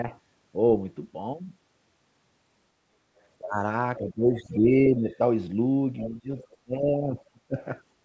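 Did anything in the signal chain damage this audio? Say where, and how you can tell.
Yes. The talker's level drops four times: by about 25 dB from 3.41 to 3.6 s, by about 10 dB across 3.98 to 5.05 s, by about 10 dB from 6.07 to 6.29 s, and by about 30 dB from 6.61 to 7.58 s. The likely cause is speech suppressed in double talk. At the call-processing stage, the echo canceller's suppressor could not separate this voice from the far end playing at the same moment, so it pulled both down.

A second, fainter voice also surfaces in short scraps: 4.36 to 4.54 s at about 25 dB below the talker, 4.96 to 5.15 s at about 30 dB below, 5.98 to 6.08 s at about 15 dB below, and 6.39 to 6.56 s at about 30 dB below. This is most likely the other side's voice leaking through. The far end plays from the loudspeaker, the microphone picks it up, and the echo canceller leaves residue that partly overlaps the suppressed stretches. 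The 8 kHz band ceiling fits G.722 at 64 kbps.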